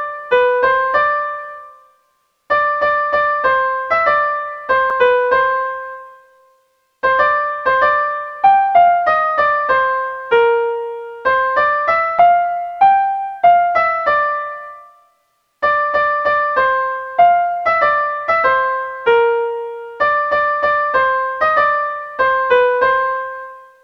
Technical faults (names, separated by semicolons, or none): damaged data in a compressed stream